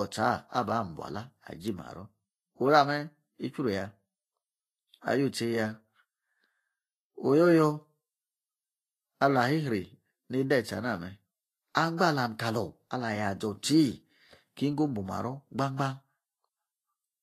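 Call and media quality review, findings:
Grainy, hissy speech throughout, nothing above 14.2 kHz; treble detail turned to noise, likely Vorbis compression near 26 kbps. Grain, not mere low-pass dullness.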